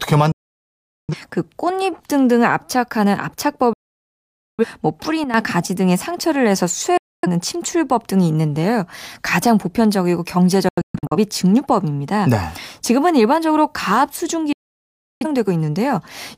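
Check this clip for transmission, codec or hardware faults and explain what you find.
Two faults are present in this speech clip: repeated digital broadcast dropouts and one sudden gain jump.

Digital broadcast dropouts occur at 0.32–1.15 s, 3.73–4.65 s, 6.97–7.28 s, 10.69–11.17 s and 14.53–15.26 s. Each time, the receiver stopped getting decodable frames and muted until valid data returned. The sound fades out over about 3 ms and goes silent for 0.26 to 0.85 s. The 10.69 s event is broken into several short holes, the longest 0.13 s. Speech sent during these gaps is lost.

The sudden gain jump comes between 5.24 and 5.34 s, where the level drops abruptly by about 10 dB. The speech and the background noise fall together, with no ramp between the two levels. This is likely a digital gain change applied from one sample to the next, such as a level setting switched without smoothing.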